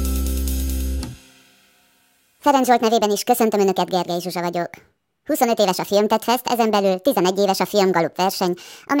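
From 2.43 s on, a section at the wrong speed plays 1.48 times fast, likely a clock mismatch; pitch and tempo rise together, unlike pitch-shifting.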